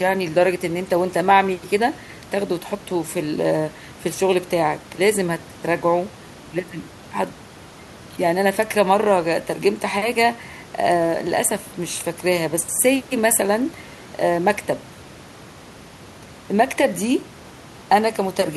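Listening through this speech recording, nothing stood out as a technical problem; the only thing beneath the talking is the room's own background noise, sitting about 24 dB below the speech.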